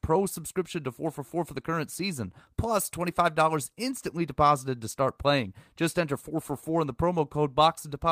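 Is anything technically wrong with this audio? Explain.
No, nothing technically wrong stood out on listening to this speech recording.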